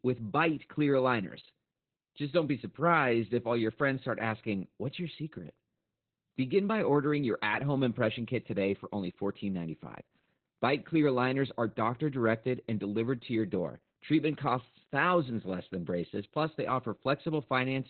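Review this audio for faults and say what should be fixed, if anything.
Opus voice compression throughout: SILK coding in narrowband leaves nothing above 4.3 kHz, and coarse excitation makes the speech muffled and hoarse, consistent with roughly 8 kbps. Encode at a higher bitrate so Opus keeps wideband or fullband speech.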